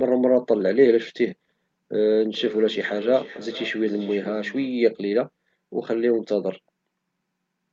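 Feedback echo between two devices runs from 2.35 to 4.92 s in this speech clip: another device in the room replays the call and the microphone picks it up again. Each phrase returns roughly every half second, thinner and ringing, peaking about 14 dB below the speech, within a call band that stops at 8 kHz.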